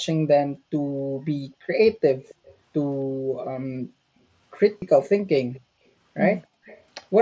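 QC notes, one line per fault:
2.23–2.55, 5.00–5.09, 5.36–5.61 and 6.65–6.83 s: echo leak. A faint copy of the speech trails by 273 ms, at about 30 to 20 dB below it, likely from uncancelled loudspeaker pickup. A spectrogram shows weak duplicate harmonic traces offset 273 ms.
4.78–4.82 s: concealed Bluetooth headset packet loss. A 37.5 ms gap, which fits five lost headset frames, was filled by repeating the last pitch cycle. The result is a brief buzzy tone with a warble where real audio resumes. The waveform shows identical repeating cycles at steady level.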